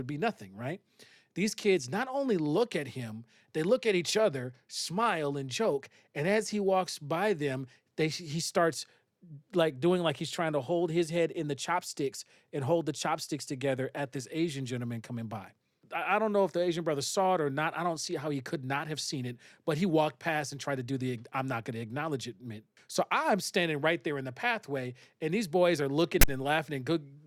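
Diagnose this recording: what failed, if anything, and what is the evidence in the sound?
A harsh, hard-edged rasp of static breaks in at 26.21 s and stops abruptly by 26.28 s, dropping to dead silence before it ends. This is file tags played as audio at the storage and playback stage: the decoder read a text metadata block and its zero padding as samples.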